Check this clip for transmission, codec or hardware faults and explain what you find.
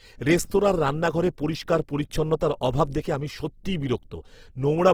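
One fault runs through the whole recording: heavy Opus compression, likely at a low bitrate around 16 kbps. Throughout the speech, the codec damage is plainly audible as a noisy, rough, grainy texture. The encoder stays in its music-oriented CELT mode and keeps every band's energy. When bits run short it fills bands with folded lower content or noise rather than leaving them empty. Fullband content still reaches about 20.2 kHz. That grain without gaps sets it apart from MP3, whose spectral holes give a swirling, watery sound, and from Opus's muffled, hoarse speech mode.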